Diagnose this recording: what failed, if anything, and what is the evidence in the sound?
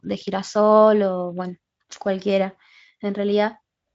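No failure detected here.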